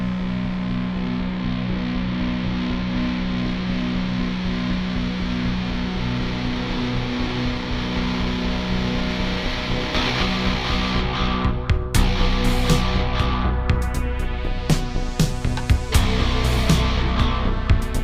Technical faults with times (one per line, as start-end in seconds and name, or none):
none